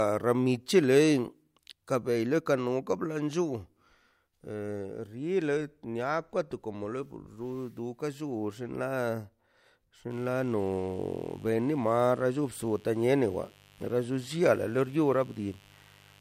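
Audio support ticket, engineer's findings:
Mains buzz, 10.1 s to end: steady raspy 50 Hz buzz well under the speech. Switching spikes, likely from a dimmer, rectifier or missing shield. Spectrogram shows stacked 50 Hz harmonic lines reaching several kHz.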